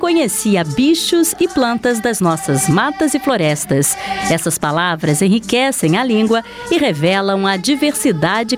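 From start to finish the sound shows gain pumping: loud and soft parts sit closer in level and the sound is squashed, with the gain swinging around 10 dB. The likely cause is input gain set far too high, with a fast limiter clamping down. On a waveform the peaks look flattened and the quiet stretches bulge upward.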